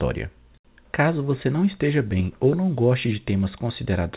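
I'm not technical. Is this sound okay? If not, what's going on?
Yes, no faults here.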